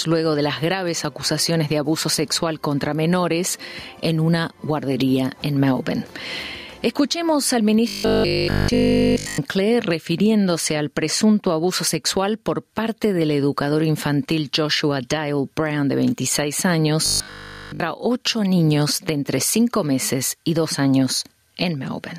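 Gain pumping runs through the whole recording, with the level swinging by around 10 dB. Loud and quiet moments sit unnaturally close together, giving a squashed, breathing quality. This is likely an input gain set far too high, with a fast limiter or compressor clamping down on each peak and releasing in the pauses. Robotic sound from repeated short buffers appears from 7.88 to 9.38 s and again from 17.06 to 17.80 s. In both stretches the audio collapses into a rigid, metallic buzz pitched at 50 Hz that only loosely tracks the underlying sound, and essentially none of the real signal gets through. A 50 Hz buzz points to a 20 ms chunk being looped, most likely because fresh audio stopped arriving and the playback side kept replaying its last buffer to fill the gap.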